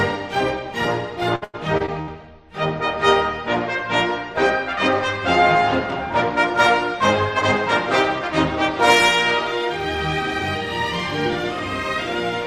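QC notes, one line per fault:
1.35–2.09 s, repeated packet loss (robotic sound). Short holes keep opening in this stretch, the longest about 98 ms. Each is patched by stretching the previous sound. Around a third of the span is filler, so the sound turns choppy.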